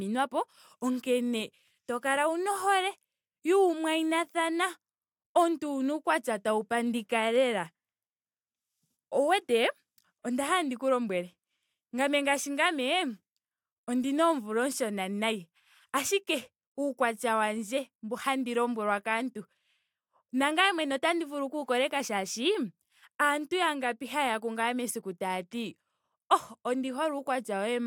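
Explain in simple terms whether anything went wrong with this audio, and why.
Nothing went wrong here: the speech comes through with no technical faults to point out at any moment in the recording.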